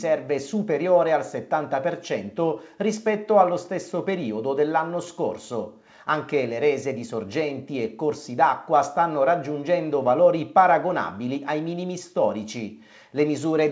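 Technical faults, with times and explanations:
No faults found; the audio passed through a WebRTC call path whose band stops at 8 kHz, which fits a G.722 wideband codec at 64 kbps.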